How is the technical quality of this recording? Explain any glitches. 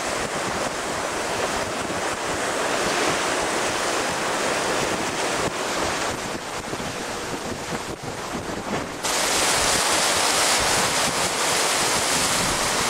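One fault stands out: a call bitrate drop from 5.62 s to 9.49 s. The bandwidth estimate for the call fell, and the encoder was forced to spend far fewer bits. The sound fits a cut from around 128 kbps to roughly 14 kbps, held at that floor for about 3.8 s. With so few bits, Opus quantises coarsely and discards the high frequencies, so the audio turns muffled, rough and watery until the rate recovers near 9.49 s.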